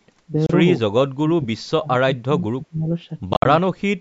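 At 0.46 s the speech cuts out for about 29 ms, ending at 0.50 s, and at 3.33 s it breaks up again until 3.45 s, with about 87 ms missing in pieces and the longest gap about 58 ms. This is a Bluetooth dropout, likely caused by packets that reached the headphones too late and were discarded. Speech resumes further along, as if it had kept playing. On the waveform these are flat, sharp-edged holes, and on the spectrogram they are empty vertical bands across all frequencies.

From 0.88 to 1.87 s and from 2.03 to 2.89 s the talker's level sinks and parts of the speech drop out, by around 35 dB and 30 dB at the deepest. A shorter dip of around 25 dB follows from 3.73 to 3.82 s. This is speech suppressed in double talk, likely because the echo canceller could not tell this talker from the far side's echo and turned both down. On the waveform the envelope shrinks in ragged chunks, and on the spectrogram those spans fade and thin out.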